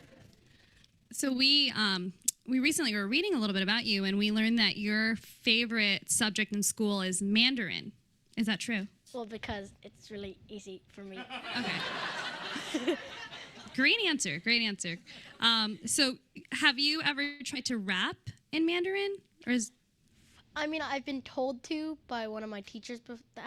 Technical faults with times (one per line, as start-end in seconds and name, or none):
0.00-1.43 overlap-add ripple
17.23-17.42 call audio freeze
17.54-17.57 short concealed packet loss
19.31-20.11 jitter buffer speed-up
20.68-21.61 jitter buffer speed-up